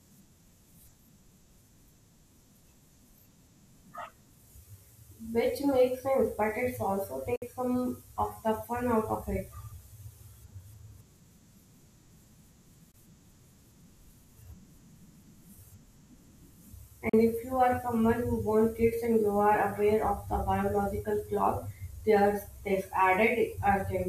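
Three short holes cut into the speech, each snapping to silence and resuming further along, likely a Bluetooth dropout where packets missed the headphones. There are 56 ms at 7.36 s after "sense but it's also", 19 ms at 12.92 s, and 37 ms at 17.09 s before "if you are someone".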